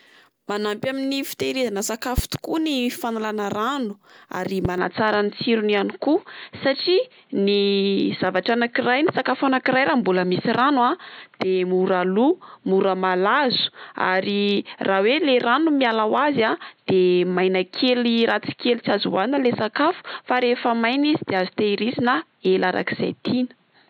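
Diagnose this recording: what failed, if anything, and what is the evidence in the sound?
A loud pop, likely from a voltage pulse in the analogue wiring: two sharp pops from 2.18 to 2.39 s and one at 4.65 to 4.68 s, each about 15 dB above the speech.

The input switched to a poorer device, likely a narrower-band microphone, at 4.78 s with no gap: from then on nothing above 4.3 kHz, a level shift of about 5 dB, and new noise about 45 dB down.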